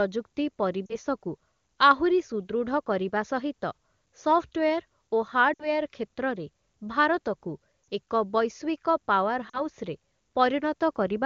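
Lost AMR speech frames at 0.86, 5.54, 7.83 and 9.49 s: the decoder repeats stale pitch with falling gain, so the gaps show as smeared, fading harmonic stripes.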